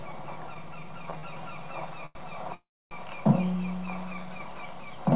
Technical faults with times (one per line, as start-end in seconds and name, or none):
1.19-1.24 short stall from a late packet
2.06-2.16 short stall from a late packet
2.54-2.92 call audio freeze